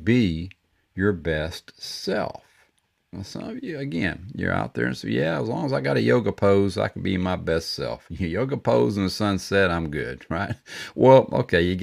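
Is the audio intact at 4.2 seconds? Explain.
Yes, the speech at 4.2 seconds runs cleanly, with no dropout, click, distortion or other fault audible at that moment.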